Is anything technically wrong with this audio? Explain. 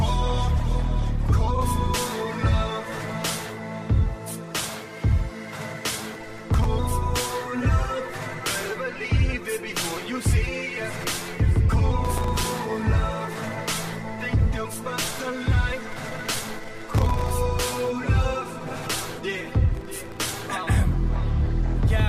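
Yes, there's processor overload crackle at 5.93–6.65, 12.05–12.58, 15.92–17.31 and 19.75–20.27 s. About 30 to 100 tiny buffers per burst, each well under a millisecond, missed their deadlines and dropped to silence, so it tears gritty until the load eases.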